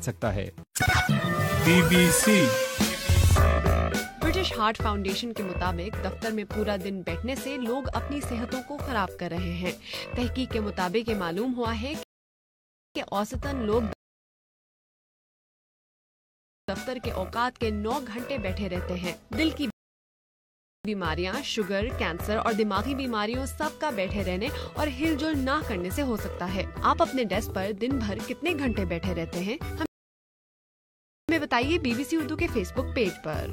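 Four rebuffering stalls: 12.03–12.96 s, 13.93–16.69 s, 19.70–20.85 s and 29.86–31.29 s. Playback runs dry, drops to dead silence, then resumes exactly where it stopped, adding roughly 0.9 to 2.8 s each. Waveform and spectrogram show flat, empty gaps with no missing material.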